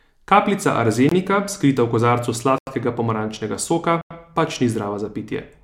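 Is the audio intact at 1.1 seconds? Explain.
No. From 1.09 to 1.12 s the speech drops into a block of digital silence about 23 ms long, which fits an unfilled 1024-sample output buffer. The signal cuts to zero and back without a fade, heard as a short hole.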